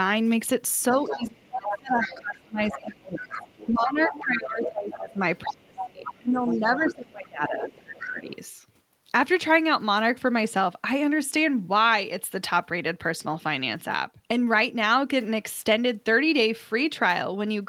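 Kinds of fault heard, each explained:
Speech suppressed in double talk: From about 0.92 s to 8.3 s the talker's speech repeatedly sinks, dulls and breaks up in pieces, at its deepest dropping around 25 dB, across most of that stretch. This coincides with the far end speaking at the same time. The likely cause is an echo canceller that could not tell the near talker from the loudspeaker echo during double talk and turned everything down together.
Other side's voice leaking through: A second voice can be heard under the talker at 1.05–3.68 s, 4.03–4.23 s, 4.63–5.07 s, 5.76–6.94 s and 7.61–8.34 s. It sits roughly 10 dB below the main speech, except in the last stretch, where it is far fainter, around 25 dB down. It is likely the far end's loudspeaker playback reaching the microphone because the echo canceller did not fully remove it.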